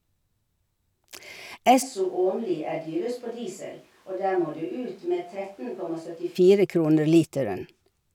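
From 1.84 to 6.34 s, the speech turns abruptly roomy, thin and about 10 dB quieter. The likely cause is a switch to a distant microphone.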